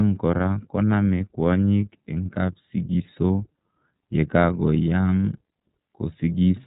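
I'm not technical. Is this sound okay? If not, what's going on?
No. From start to finish, the speech has been squeezed through the iLBC codec, a phone-style voice compression system. It cuts the sound into 30 ms slices and codes each one separately, and it drops everything above 4 kHz. That is why the voice sounds muffled and thin, like a phone call, with a plainly audible rough, slightly robotic texture running through the whole recording.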